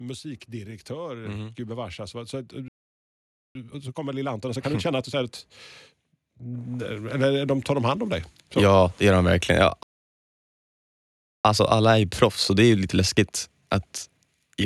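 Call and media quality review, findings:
Automatic gain rising, 0.23 to 5.46 s: speech and background swell together by about 11 dB over roughly five seconds. AGC on the capture side judged input too quiet and ramped gain up slowly. Probable component: capture-side AGC.

Automatic gain rising, 6.41 to 9.30 s: second gradual swell, about 6 dB, speech and noise floor rising as one. Same AGC re-raising gain after the level sagged. Probable component: capture-side AGC.

Playback stall, 2.68 to 3.55 s: output drops to silence mid-speech for 0.87 s, then resumes. Likely cause: jitter buffer underrun or a blocked audio thread starving the output. Probable component: receive-side player.

Playback stall, 9.83 to 11.45 s: silence in mid-flow for 1.62 s before audio returns. Longer gap, same likely starvation of the output path. Probable component: receive-side player.

Time-compressed catch-up, 3.55 to 5.27 s: speech hurried to 1.5x with pitch unchanged, directly after the first stall. 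Player drains the backlog by cutting and cross-fading short segments. Probable component: playout time-scaling.

Time-compressed catch-up, 11.45 to 14.45 s: milder speed-up, 1.15x, pitch held, following the second stall. Same backlog reduction, spread over three seconds. Probable component: playout time-scaling.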